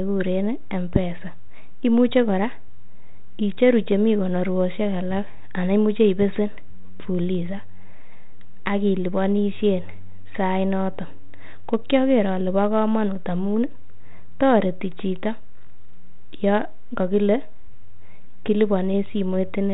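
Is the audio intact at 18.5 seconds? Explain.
Yes, the audio is intact at 18.5 seconds, with no fault at that moment beyond the ordinary band-limited sound of 32 kbit/s G.726 ADPCM telephone coding.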